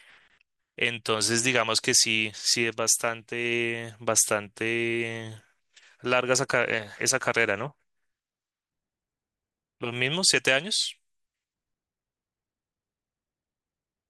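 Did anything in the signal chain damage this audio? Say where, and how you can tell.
No, nothing in the signal chain damaged this recording.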